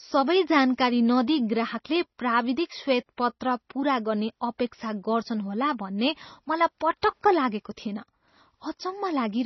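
Speech, with heavy MP3 compression damage throughout. Nothing is left above about 5.9 kHz, so the treble is cut flat and s sounds lose their hiss. The remaining sound is watery and swirly, with metallic chirps on sibilants and smeared consonant attacks, as weak frequency lines drop in and out from frame to frame. The likely cause is an encoder that ran short of bits and sacrificed the top band and quiet detail, which fits a bitrate around 24 kbps.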